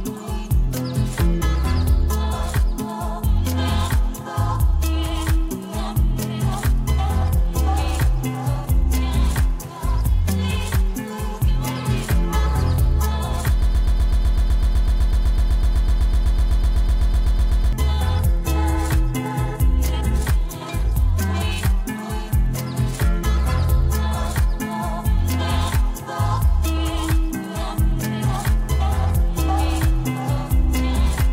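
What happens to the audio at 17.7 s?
At 17.73 s a broken-record loop ends. From 13.62 s, a stalled player, encoder or stream likely kept resending the last fragment it held, a piece 125.6 ms long, repeated back to back 33 times. The result is a rapid, mechanical stutter at about eight cycles per second, each cycle identical, lasting about four seconds. The audio that belonged to that stretch is lost, and fresh sound returns only as the loop releases at 17.73 s.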